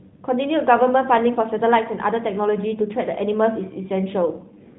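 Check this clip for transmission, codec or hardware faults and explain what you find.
One codec fault turns up right at the end. From 4.25 s to the end there's an AMR rate drop: the network pushed the AMR-NB coder down to a leaner mode, spending bits on error protection instead. The band stays put and nothing cuts out, but the speech turns buzzier and more synthetic, which fits a step from 12.2 down to about 5.9 kbit/s, against the light coding roughness heard before it.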